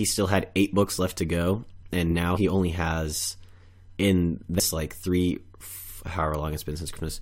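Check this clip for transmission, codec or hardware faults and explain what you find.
The clip has damaged data in a compressed stream, at 2.36 to 2.38 s, 4.59 s and 6.96 s. Corrupted frames make the decoder lose sync, heard as a brief chirp, squawk, click or short hole.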